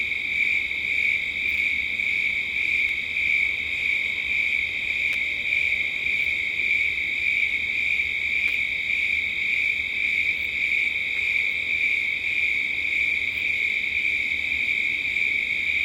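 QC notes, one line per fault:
2.89 s, repeated buffer: one block of about 10.7 ms plays twice, with a hard join at the repeat. That fits a 512-sample buffer. The device ran out of new audio and replayed the last block. It is heard as a brief click rather than a stutter.
5.13–5.15 s, 8.48–8.50 s, 11.17–11.19 s, repeated buffer: the same block plays three times at each point, giving a short buzz of about 21 ms. No audio seems to be lost.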